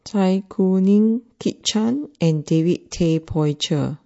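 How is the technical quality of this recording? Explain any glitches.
The recording has clearly audible coding damage throughout and one brief glitch near the end.

Across the whole speech clip the sound turns watery and swirly, with metallic chirps on s sounds. This is likely MP3 compression at a low bitrate, around 40 kbps. The encoder starves weak frequency lines, which flicker on and off between frames. That flicker sets it apart from plain low-pass filtering.

From 3.26 to 3.28 s a pre-echo appears. A hiss about 11 dB above the surroundings smears roughly 21 ms ahead of a sharp attack. The codec never switched to short blocks, so noise sized for the loud onset spread across a 52 ms window into the quiet before it. Because the smear comes before the attack rather than after it, it is not reverb.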